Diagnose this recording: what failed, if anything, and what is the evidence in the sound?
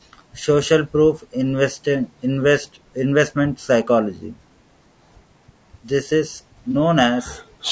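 Codec stage: the speech is rough and grainy from start to finish, with noise filling the gaps between harmonics and a thin, synthetic-sounding top band. That points most likely to low-delay AAC compression of the AAC-ELD kind, at a rate that fits about 32 kbps. Its short frames cannot resolve pitch harmonics finely. The missing content above 8 kHz comes from the call's microphone processing, a separate limit on the band, and is not this damage. The grain is steady rather than intermittent, which sets it apart from network loss.

Network stage: from 6.71 to 6.76 s there is a brief smeared, noisy patch of about 30 ms, which fits a single lost frame. This is AAC frame loss with concealment: the decoder rebuilt the gap from the last good spectrum instead of leaving silence. That explains why there is no click or dropout. The patch sounds smeared and blurred rather than cut, and it is too short to decay into a fade, which sets it apart from a buffer underrun.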